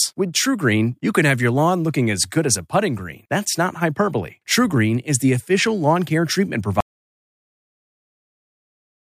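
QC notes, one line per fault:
6.80–9.08 s, audio dropout to silence: right after "official lawn care treatment" the speech stops mid-flow and the clip falls into silence, with no room tone or hiss underneath, for the last 2.27 s through to the end. The sound never returns. The signal likely stopped reaching the recorder, through a lost connection, a disconnected device or a mute, while the recorder kept writing silence, so anything spoken after that point is gone.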